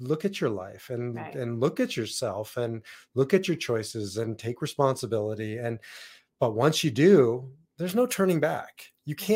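From 7.89 s to the end at 9.35 s, the speech has pre-emphasis left on. The treble lift was never undone, so highs sit about 10 dB above 1 kHz at 10 kHz, following the FM 50 µs curve's smooth rise from roughly 3 kHz rather than a narrow peak, leaving the sound thin, bright and sibilant.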